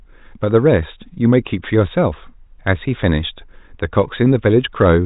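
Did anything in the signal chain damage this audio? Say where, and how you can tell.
No, nothing in the signal chain damaged this audio.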